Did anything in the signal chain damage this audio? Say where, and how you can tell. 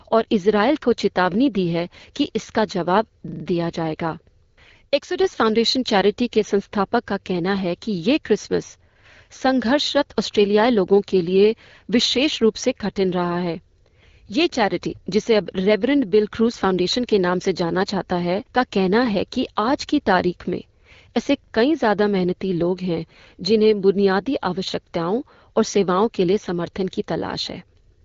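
Yes, at the driver or buffer stage: a repeated buffer from 3.28 to 3.44 s. One short slice of speech plays four extra times with hard joins, a rapid stutter whose period fits a 40 ms buffer. Fresh audio arrived late, so the device replayed its last block; nothing appears skipped.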